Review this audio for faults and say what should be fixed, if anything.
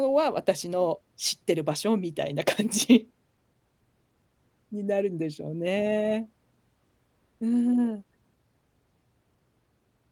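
Sample clock jitter runs through the whole speech: a faint roughness, about 40 dB below the signal, that swells on loud, bright sounds and disappears in pauses, unlike a steady noise floor. Replace or stabilise the converter's clock source so timing wander stays well below a microsecond. The light Opus compression at 24 kbps is not the cause.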